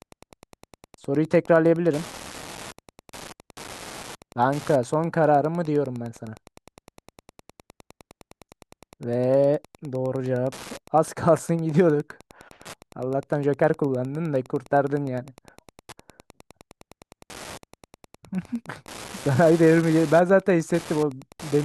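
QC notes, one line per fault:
Throughout: Wi-Fi interference, steady ticking ten times a second, roughly 25 dB below the speech, as the circuit rectifies a nearby radio's 102.4 ms beacon.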